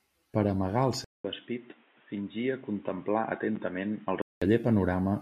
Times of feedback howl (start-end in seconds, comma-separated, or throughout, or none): none